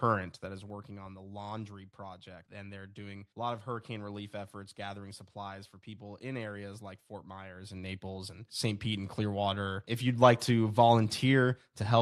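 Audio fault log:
0.28–0.93 s, zipper noise: The level falls roughly 10 dB in steps of about 2 dB, some seven a second. Each unsmoothed step clicks before "on the laundry project".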